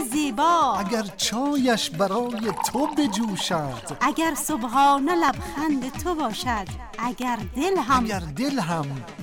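At 5.29 to 5.31 s and again at 7.22 to 7.24 s, a single loud pop jumps about 15 dB above the sound, likely from a voltage pulse entering the chain. Unlike a dropout, the sound carries on underneath; unlike a tiny click, it's a forceful, full-bodied burst.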